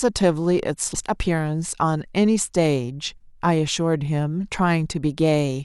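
Damaged data in a compressed stream corrupts this speech recording at 0.94 s, so the decoder misreads the frame there, loses sync and hunts for the next valid frame header. The result is a brief glitch cutting through the speech at that moment.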